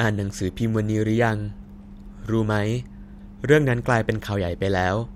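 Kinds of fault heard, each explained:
Nothing to flag here, as no technical faults turn up anywhere in this short bit of speech.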